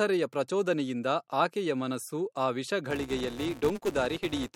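Filter restarted on every block, from 2.91 s to the end: each block starts from zero filter state, causing a 200 Hz buzz that follows the speech level.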